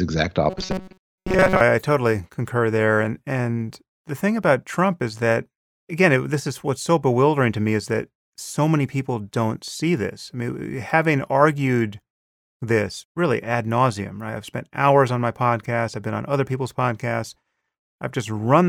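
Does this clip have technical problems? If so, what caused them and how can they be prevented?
Yes. Robotic sound from repeated short buffers runs from 0.50 to 1.61 s, just before "I I totally concur". For most of that stretch the speech becomes a rigid, metallic buzz fixed at 188 Hz that only loosely follows the words. The likely cause is audio arriving too seldom, so playback repeats a fragment of about 5.3 ms instead of the missing audio. A larger jitter buffer and steady network or CPU headroom prevent this.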